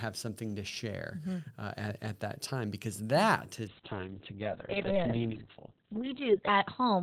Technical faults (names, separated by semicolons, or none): call bitrate drop